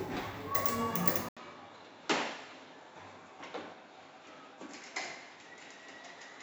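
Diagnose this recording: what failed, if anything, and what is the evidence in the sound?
At 1.29 s the audio drops out for 80 ms, then comes back a few dB quieter and duller, with nothing above 7.5 kHz and a faint new noise floor well below the signal, lasting to the end of the clip. That abrupt change in bandwidth, level and background points to the input switched to a poorer device at the driver or routing stage. The likely cause is the system swapping to another microphone or a headset's narrower-band capture path mid-recording.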